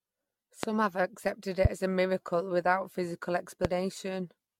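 Throughout the speech there is generation loss, most likely from the audio being passed through an AAC-LC style encoder around ten times at a modest rate, which fits something near 96 kbit/s. Each new encode quantised on a fresh frame grid, so the errors piled up into a swirly, hollow smear with softened consonant attacks. On a spectrogram, content stops sharply at 17.3 kHz, and the band below is pocked with flickering holes.

At 0.63 to 0.66 s, just before "have accepted", a single loud pop bursts through, and a second one comes at 3.65 to 3.67 s, right after "a miracle without physical". Each is likely a brief voltage spike, such as a switch or static discharge, sitting about 20 dB above the speech, which continues underneath. In the waveform each shows as a tall, narrow spike; on a spectrogram, as a thin vertical stripe spanning the band.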